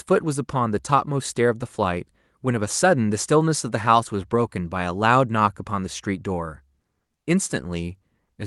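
This speech clip shows no technical faults; it carries the ordinary character of a call codec, with the high frequencies stopping at about 12 kHz.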